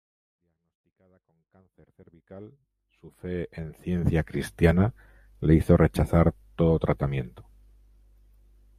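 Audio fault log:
No faults found; the speech fades in smoothly from the very start and reaches full level at 4.43 s.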